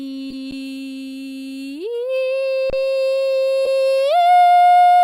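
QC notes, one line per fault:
0.30–0.34 s, corrupt frame decoded: a couple of damaged music frames got decoded anyway, so energy lands at wrong frequencies as a fairly quiet chirpy blip.
0.51 s, underrun with held sample: the output ran dry for about 11.6 ms, fitting a 512-sample buffer. The waveform sits flat at its last value, then playback picks up where it left off, so it's a soft dropout with barely any click.
2.70–2.73 s, underrun with held sample: same thing but longer, about 29 ms of flat held level. Nothing got skipped, so the music just stalls briefly and resumes gently.
3.65–3.68 s, corrupt frame decoded: again about two bad frames played through, but this one's much louder, a squeak or noise burst where misread codes scatter energy across wrong frequencies.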